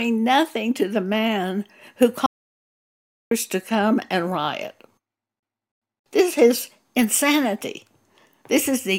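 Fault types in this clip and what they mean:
Audio dropout to silence: The speech cuts off at 2.26 s and returns at 3.31 s. That leaves about 1.05 s of total silence, likely from a lost input signal.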